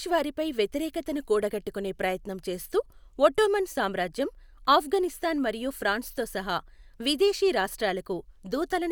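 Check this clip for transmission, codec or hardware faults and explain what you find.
Nothing faulty can be heard in the speech: the signal stays continuous and steady throughout, with no audible sign of trouble anywhere along its path.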